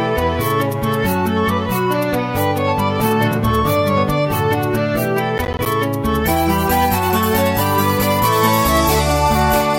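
At 5.38 s, processor overload crackle starts and runs to 5.66 s. The processor misses a string of deadlines. Each missed buffer leaves a short silent gap with hard edges, which suggests buffers of around 10 ms. Together the gaps sound like gritty, tearing crackle over the sound.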